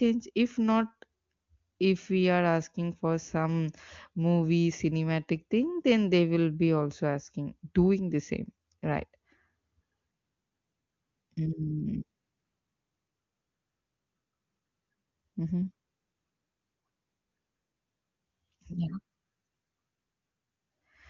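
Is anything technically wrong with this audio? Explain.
No, this speech clip has no technical problem: it comes through the AMR wideband (HD Voice) codec with the clarity expected of one of its top bitrates, and any coding damage is faint at most.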